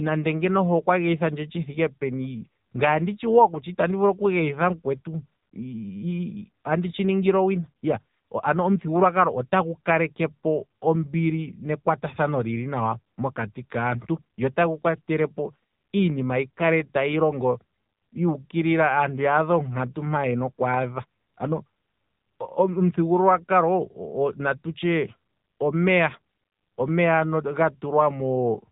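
From start to finish the speech carries the sound of the AMR narrowband mobile codec. Nothing survives above about 3.8 kHz, and the voice has a buzzy, synthetic edge that comes from rebuilding each 20 ms frame from a vocal-tract model and a handful of pulses. The damage is plainly audible and fits a low mode near 7.95 kbps. A simple low-pass filter would muffle the sound but leave it natural. This artificial, pulse-driven grain is what identifies the codec.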